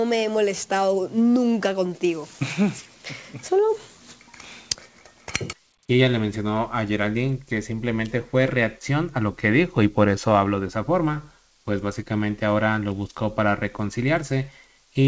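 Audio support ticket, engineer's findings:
No faults found in clip.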